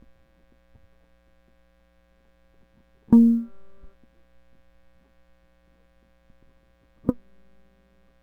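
Across the whole music clip there is sample clock jitter. The converter's clock wanders by a few microseconds, around 5 µs, so each sample lands slightly off its proper instant. Because the resulting error scales with how fast the waveform is changing, it shows up as a fine hiss and grittiness riding on loud, bright passages, sitting roughly 45 dB under the music, and it drops away wherever the signal falls quiet.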